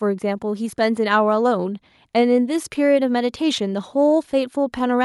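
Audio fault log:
No technical faults can be heard in this speech recording; the signal stays steady and intact over its whole duration.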